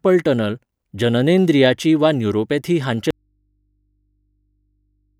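After "टनल जननेंद्रियाची वा न्यूरोपॅथी", the speech cuts off abruptly at 3.11 s, leaving only faint hum to the end: an audio dropout to a faint residue, likely a lost signal on a still-live path.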